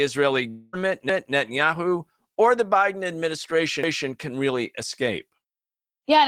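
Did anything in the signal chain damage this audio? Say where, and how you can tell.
Yes. From 0.49 to 0.75 s the audio stops and a fading buzzy continuation fills the quarter-second gap without reaching silence, likely a network dropout. That long network dropout is far longer than a packet glitch.

At 2.35 to 2.38 s a short concealed packet loss leaves a brief smear. About 20 ms never arrived and was papered over by extending the preceding sound. It is too short to be a dropout.

From 3.83 to 4.08 s a quarter-second passage plays twice. This is overlapping chunks from the buffer or processing stage, where a 2.5 s block began before the previous one ended. The audio is duplicated, not lost.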